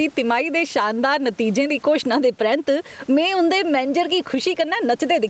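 Throughout the speech, gain pumping is audible. The gain swings by something like 10 dB as each loud syllable arrives, so soft and loud passages sit unnaturally close and everything sounds squashed. The likely cause is microphone gain set far too high, with a fast limiter clamping down on each peak. On a waveform the envelope looks flattened, with peaks pinned near one ceiling. A spectrogram shows the room noise, normally about 37 dB below the speech, with nothing above 8 kHz.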